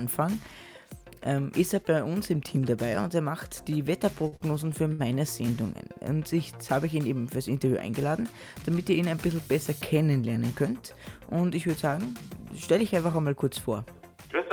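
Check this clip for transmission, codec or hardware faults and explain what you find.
One transmission fault is audible. From 4.27 to 5.01 s there are repeated stalls (stutter): four brief holds totalling 154 ms, the longest 58 ms. The jitter buffer kept running dry, so the last sound was stretched. Unlike packet loss, nothing is skipped; the audio just drags.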